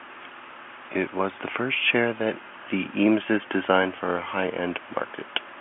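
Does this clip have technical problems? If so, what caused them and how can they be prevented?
No, nothing stood out on listening beyond the narrow telephone band of the G.711 line, which tops out a little below 3.7 kHz.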